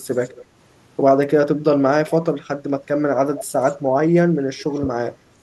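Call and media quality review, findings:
Echo leak, 0.12–0.45 s, 2.08–2.17 s, 3.35–3.77 s, 4.59–4.89 s. Faint delayed copy of the speech trailing the original, about 25, 20, 15 and 25 dB below it; strongest at 3.35 s. Delay drifts from 186 to 200 ms. Likely far-end loudspeaker pickup not fully removed by the echo canceller, residual returned to sender.

Speech suppressed in double talk, 2.36–2.46 s and 4.81–4.86 s. Brief speech dips of about 15 dB (100 ms), then about 10 dB (50 ms), the second inside the echo at 4.59 s. Likely echo canceller unable to separate local talker from loudspeaker echo during overlap, attenuating both.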